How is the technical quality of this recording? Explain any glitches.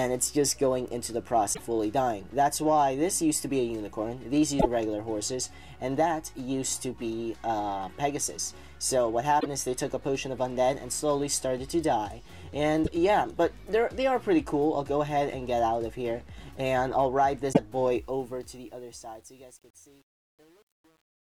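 The recording has two kinds of technical fault: repeated bursts of damaged data in the compressed stream, and truncation distortion on the closing fade.

Damaged data in a compressed stream occurs at 1.50–1.60 s, 4.56–4.66 s, 9.37–9.46 s, 12.82–12.88 s and 17.52–17.59 s. Each is a short chirp or blip, about 70 to 100 ms, where the decoder misreads corrupted frames and resyncs, often with a skip forward.

Truncation distortion on a fade starts at 17.94 s and runs to the end. It is worst from 18.44 s, as the fade-out that begins around 18 s approaches silence at 21.27 s. The fade keeps only about 8 bits without dither, so the quiet tail turns gritty. Unlike noise, the grit follows the level.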